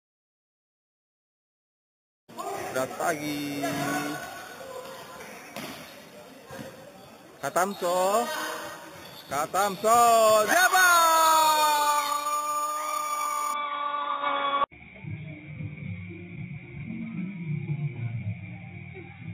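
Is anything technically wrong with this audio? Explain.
Yes. From 0.0 to 13.54 s there is imaging from sample-and-hold upsampling. The sound points to an 8 kHz original raised to 44.1 kHz by repeating each sample without smoothing. This leaves mirrored copies of the spectrum, the lowest spanning 4 to 8 kHz at about 12 dB below the signal. It is heard as a bright metallic fizz. Unlike steady hiss, it rises and falls with the sound, and its lowest band moves opposite to the pitch.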